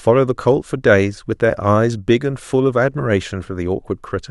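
No faults detected anywhere in the speech recording.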